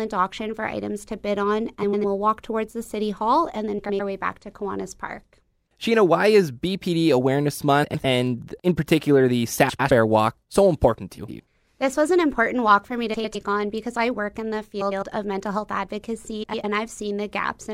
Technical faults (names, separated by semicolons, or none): frames out of order